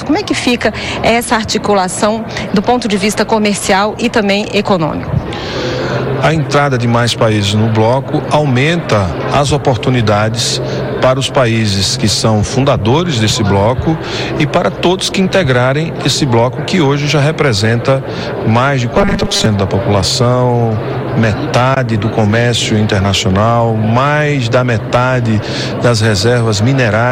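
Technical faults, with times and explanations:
18.94 to 19.46 s, robotic sound from repeated short buffers: a rigid metallic buzz at 200 Hz, likely from a 5 ms slice replayed whenever new audio arrived late, replacing roughly half the real signal. Spectrogram shows evenly spaced 200 Hz harmonic lines, and the waveform shows identical repeating cycles.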